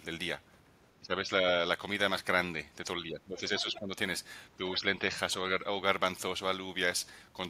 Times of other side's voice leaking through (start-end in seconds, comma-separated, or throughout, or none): 3.59-3.79